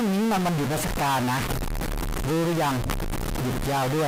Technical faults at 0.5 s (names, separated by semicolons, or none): stuck bit